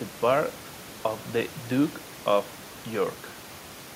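No technical faults are audible.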